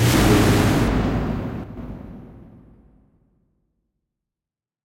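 One channel likely drops out from 1.64 to 1.77 s, so the shared sound dips abruptly by about 6 dB and anything unique to that channel vanishes.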